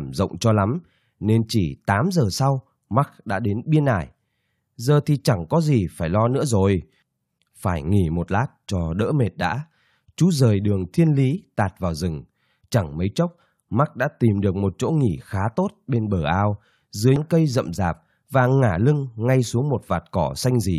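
At 17.16 s, between "bên bờ ao dưới" and "cây rậm", damaged data in the compressed stream makes the decoder lose frame sync, producing a brief glitch.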